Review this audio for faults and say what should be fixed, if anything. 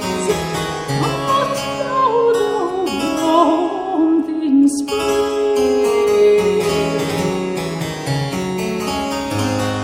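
No faults can be heard anywhere in the audio. Nothing needs to be fixed.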